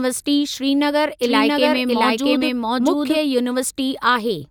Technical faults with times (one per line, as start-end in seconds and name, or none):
1.23-3.19 doubled audio track